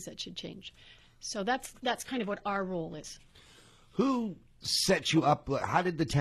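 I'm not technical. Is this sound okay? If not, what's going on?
No. From 1.54 s to the end, the speech loses clarity all at once: the crisp top end goes dull, with nothing above about 12.4 kHz, and smearing and warbling artefacts creep in. This is an adaptive stream at a lower bitrate. The player likely switched to a smaller, more heavily compressed version of the stream because the connection slowed. The switch is seamless, with no gap or dropout, so you only hear the sudden drop in quality.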